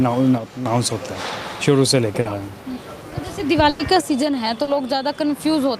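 From 0.38 to 0.66 s the level falls abruptly by about 6 dB and then recovers, likely because one channel dropped out before the stereo pair was summed to mono. On a waveform the envelope visibly shrinks to half height, and the spectrogram dims evenly across all frequencies. At 2.21 s a short concealed packet loss leaves a brief smear. About 40 ms of audio never arrived, and the receiver filled the gap by extending the preceding sound. A spectrogram shows a short stretch of smoothed, repeated texture instead of fresh detail. At 3.69 to 3.81 s a burst of packet loss leaves about 100 ms missing. The receiver bridged the gap with a fading continuation of the last sound, heard as a held, decaying tone or hiss. The waveform tapers and then jumps ahead when real audio resumes. From 4.01 s to the end the same 6 dB drop returns, with the envelope halved and the spectrum uniformly weaker. Within it, at 4.63 s, another 40 ms concealed gap adds a second brief smear.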